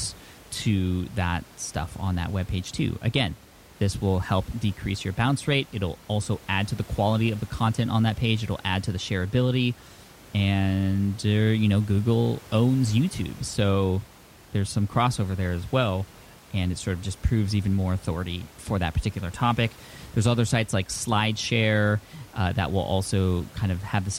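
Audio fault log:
No faults heard in this recording.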